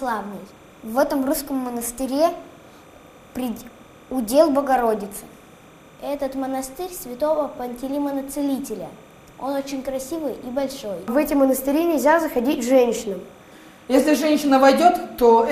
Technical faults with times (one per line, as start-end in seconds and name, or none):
0.00-15.52 timecode bleed